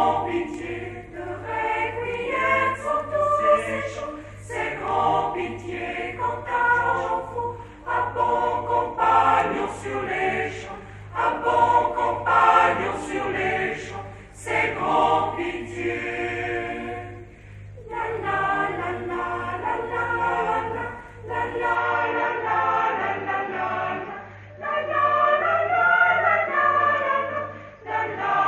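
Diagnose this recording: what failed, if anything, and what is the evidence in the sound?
At 21.75 s the sound abruptly turns duller and stays that way to the end, with nothing above 6.7 kHz, no gap and no obvious level jump, plus a faint new noise floor well below the signal. This is likely an input switched to a poorer device at the driver level.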